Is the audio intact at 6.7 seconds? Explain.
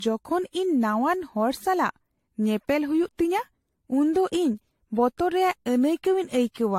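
No. At 6.7 seconds the speech carries generation loss, present throughout: swirly, hollow and smeared, with blurred attacks. It likely comes from repeated AAC-LC encoding at 64 kbit/s, about four passes, each adding fresh quantisation noise. A spectrogram shows nothing above 16.6 kHz.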